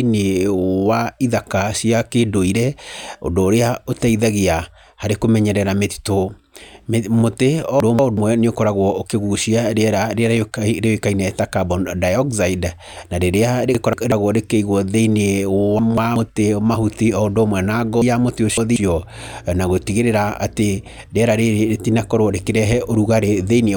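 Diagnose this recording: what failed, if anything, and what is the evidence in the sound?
Chunks out of order in the buffer stage: the speech jumbles at 7.80–8.17 s, 13.75–14.12 s, 15.79–16.16 s and 18.02–18.76 s. A 186 ms block plays one chunk late (three late at 18.02 s), so nothing's lost, just reordered with hard joins.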